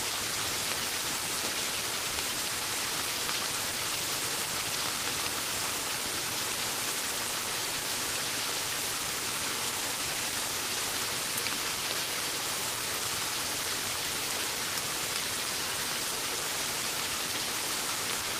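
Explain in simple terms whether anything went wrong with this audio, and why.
Nothing went wrong with this recording of sounds. What you hear is the sound itself, with nothing added or taken away by a technical problem.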